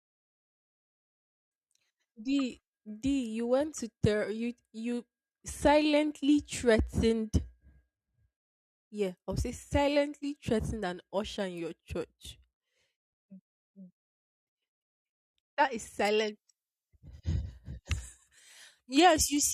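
From 16.05 s to the end, the speech shows pre-emphasis left on. The treble boost follows a 75 µs FM-style curve, but the matching de-emphasis was never applied, leaving 10 kHz about 14 dB hot relative to 1 kHz. The result sounds thin, bright and sharply sibilant.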